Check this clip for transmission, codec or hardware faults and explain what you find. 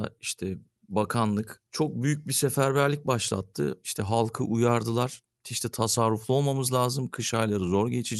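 Two timing faults run through the speech, both from the call's clocks disagreeing; the Opus-coded call path itself, with its top end stopping near 12 kHz, is not one of them.

Clock drift between sender and receiver, throughout: the delivery has a faintly unsteady pace with small hiccups at uneven intervals. The sender's clock runs roughly 4 % slow, so the receiver's jitter buffer keeps draining and must be topped up to avoid running empty.

Repeated timing corrections, from 0.02 s to 7.97 s: the speech plays at about 96 % speed, slightly drawn out, with occasional tiny stutters where short pieces are repeated. The receiver inserts these repeats to stay in step with the slow sender, adding around a third of a second in total.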